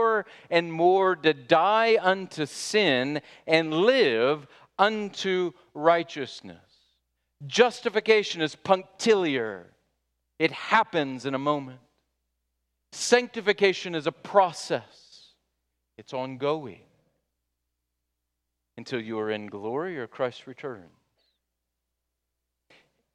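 No technical faults can be heard in this speech recording. There is nothing to flag at any point in the clip.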